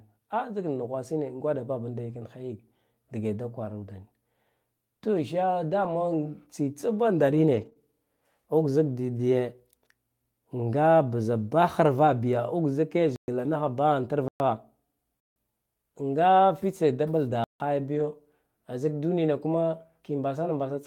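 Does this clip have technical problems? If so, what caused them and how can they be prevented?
Yes, three kinds of fault are audible in this speech clip.

Lost packets rebuilt from error correction occur at 2.09–2.15 s, at 5.83–5.89 s just after "to sha", at 7.53–7.67 s, at 12.07–12.09 s just after "bza daharva", and at 17.95–18.05 s. The rebuilt stretches are between 20 and 80 ms long. In each, the sound stays continuous but turns briefly rougher and noisier, because the decoder is playing the low-bitrate backup copy carried in the following packet rather than the original. That continuity is what separates it from concealment: real, if degraded, content is still there. Prevention: reduce network loss through a steadier connection or prioritised traffic, and let the encoder raise its bitrate when loss is detected.

Short concealed packet loss follows directly at 7.69–7.73 s and 7.73–7.77 s, each a missing stretch of about 20 ms. 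Here no backup copy existed, so the receiver extrapolated from the preceding sound and then blended back into the real audio. This gives a brief smear or wobble rather than a rough-but-intact fragment, and a short sound can disappear outright. Prevention: a slightly larger jitter buffer and a more reliable network path would let these packets arrive in time.

Blocks of digital silence cut in at 13.16–13.28 s, 14.28–14.40 s, 15.20–15.36 s and 17.44–17.60 s, lasting 120 or 160 ms. The audio drops abruptly to silence and returns with no fade. That hard edge and silent hole distinguish it from packet concealment, which fills the gap with invented sound. The block lengths point to the playback program failing to fill its output buffer in time. Prevention: give the audio thread higher priority and use a larger output buffer.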